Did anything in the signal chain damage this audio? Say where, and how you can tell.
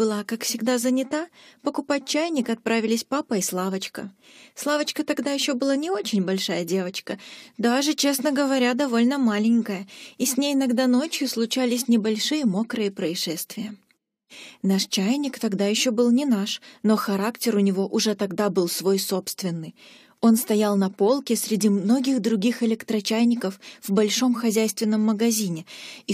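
No, nothing in the signal chain audibly damaged this audio. No stage, from wiring and conversion through to storage and playback, leaves a mark that can be heard anywhere in the clip.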